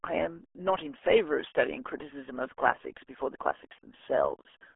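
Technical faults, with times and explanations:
Throughout, RealAudio 14.4 codec: the speech is squeezed into a telephone-style band of roughly 300 Hz to 3.4 kHz, with nothing at all above 3.7 kHz, so sibilants and consonant edges vanish and the voice turns dull and boxy. The heavy coding damage adds a gargly, bubbling texture as the codec rebuilds each short frame from a few coarse parameters. That sound fits an 8 kbit/s speech codec built for dial-up modems.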